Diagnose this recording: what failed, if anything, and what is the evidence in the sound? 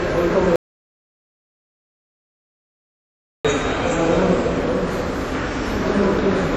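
The sound carries the smeared, swirly texture of a heavily compressed file, and nothing is present above 17.4 kHz, yet the file is a high-rate MP3. At the codec stage, this is low-bitrate audio saved at a high bitrate: the damage fits an earlier low-rate encode, something like WMA near 48 kbit/s, that was likely re-encoded at around 256 kbit/s. The second pass kept the first codec's artefacts and band limit but could not rebuild the detail already discarded.

From 0.56 s to 3.45 s the sound stops abruptly into silence, with no background noise, then resumes just as abruptly mid-flow. That is an audio dropout to silence, and about 2.9 s of material is missing. The absence of any noise floor in the gap points to the input being likely lost upstream, at the wiring, device or driver, while the recorder kept writing silence rather than pausing.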